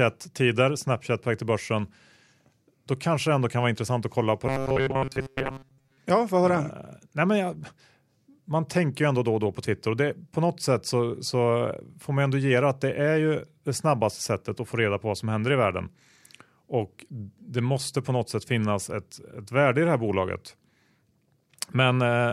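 Right after "intressant att kolla på", from 4.47 to 5.98 s, the speech goes robotic: a metallic 134 Hz buzz, likely from repeated short buffers looping about 7.5 ms.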